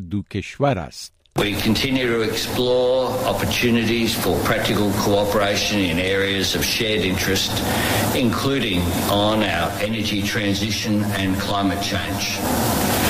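From 9.67 s to 12.43 s the sound turns hollow and phasey, a clear case of channel delay causing comb filtering. One channel runs late by roughly 10 ms, and the two are then summed to mono. Whatever both channels share cancels at evenly spaced frequencies. The first notch sits near 50 Hz, with further notches repeating up the spectrum. The result is a fixed, hollow coloration that lasts until the fault ends.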